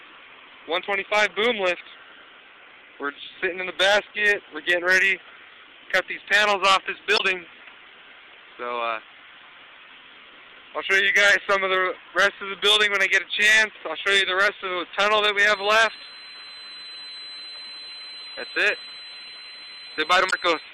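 The audio breaks up briefly at 7.14 to 7.21 s and again at 20.27 to 20.33 s, which points to damaged data in a compressed stream, where the decoder loses sync and skips ahead. From 15.39 s to the end, a steady 4.1 kHz tone sits about 20 dB below the audio, likely a feedback whistle from a loudspeaker-to-microphone loop ringing just short of a howl.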